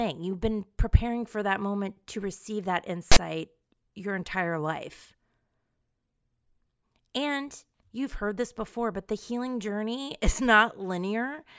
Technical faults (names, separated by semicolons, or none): file tags played as audio